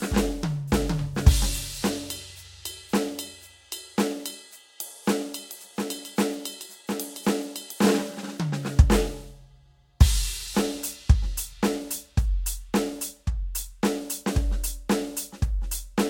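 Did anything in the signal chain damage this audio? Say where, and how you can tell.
Yes. At the codec stage, the music sounds swirly, smeared and hollow throughout, with blurred attacks and nothing above 16.6 kHz. That is more damage than one low-bitrate pass would leave. Repeated lossy re-encoding, which fits a few Vorbis passes around 63 kbit/s, is the likely cause. Each pass requantises on a shifted frame grid, so the errors stack up as generation loss.

From 5.5 to 7.82 s, a doubled audio track appears: a full-band copy about 5 dB quieter trails the original by about 0.7 s, probably from a second capture path or a misaligned edit. Unlike an echo or reverb, it has no decay or room colour, and it starts and stops abruptly.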